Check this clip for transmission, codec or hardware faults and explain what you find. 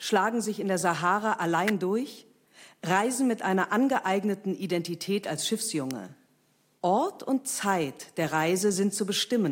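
Two electrical switching spikes break into the speech, at 1.68 s, just before "durch reisen mit einer", and again at 5.91 s. Each is a sharp snap lasting at most about 17 milliseconds and peaking around -15 dBFS, laid on top of the voice rather than replacing it. They are likely from a nearby switch or static discharge arcing into the audio line. Unlike a dropout or digital glitch, the speech continues unbroken beneath each snap.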